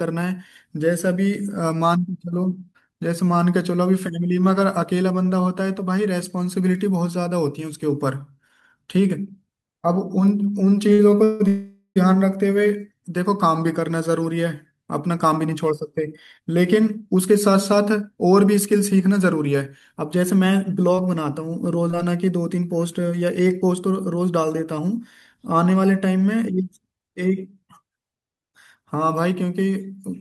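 A short stall from a late packet occurs at 10.93 to 11.10 s. One packet arrived after it was due, the jitter buffer emptied, and the receiver stretched the last sound for about 53 ms until the audio resumed from the same point. Nothing is lost, but that sound lingers a little too long with a faint buzzy sustain, and everything after it now runs about 53 ms later.

A call audio freeze follows at 11.24 to 11.42 s, and a longer one at 11.48 to 11.98 s. The likely cause is packets held up in transit, which drained the jitter buffer. The receiver kept extending the last sound as a decaying buzz, for 161 ms in the first freeze and 479 ms in the second. The second freeze fades into about 60 ms of silence before the sound resumes where it stopped. The content is intact, but the gaps push the audio further behind.

A jitter buffer speed-up runs from 15.24 to 20.47 s and again from 22.55 to 24.44 s. 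After the backlog, the buffer held more audio than its target, so the receiver trimmed tiny pitch-period slices over and over. Speech plays at 108% speed with unchanged pitch. That removes roughly 0.4 s in the first stretch and roughly 0.15 s in the second, and both sound slightly hurried.

A short concealed packet loss occurs at 20.95 to 20.99 s and again at 21.91 to 21.95 s. Each time, about 20 ms of audio never reached the decoder. The receiver patched the hole by extending the preceding sound before blending back into the real signal. Each patch is heard as a brief smear or tiny wobble, and a quick consonant there can drop out.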